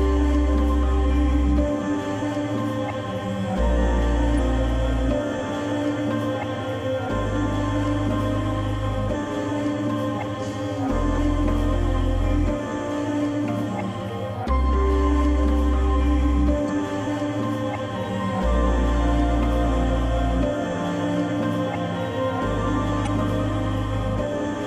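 Damaged data in the compressed stream makes the decoder misread frames, lose sync and hunt for the next frame header, leaving brief chirps or blips at 4.35 to 4.39 s, 9.13 s, 11.17 s, 16.66 to 16.70 s and 23.03 to 23.07 s.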